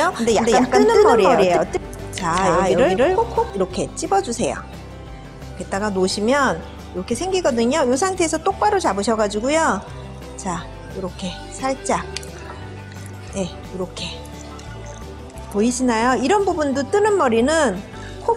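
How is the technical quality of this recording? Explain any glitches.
The recording has one clear glitch, confined to its opening seconds.

From the start until 3.5 s, a doubled audio track is heard: a second full-band copy trails the original by roughly a fifth of a second at about equal loudness, likely from a slower second capture path. Unlike an echo or reverb, it has no decay or room colour and cuts off abruptly at 3.5 s.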